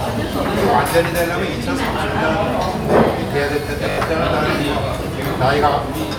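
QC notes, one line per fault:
0.88–0.90 s, repeated buffer: a 20 ms segment plays twice with a hard join, heard as a brief click-like stutter. New audio arrived late, so the output reused its last block, which points to a 20 ms buffer. Roughly 20 ms of the real signal is skipped.
3.90–3.98 s, repeated buffer: a 20 ms segment plays five times in a row, giving a short buzz at the 50 Hz repeat rate. About 70 ms of audio is lost.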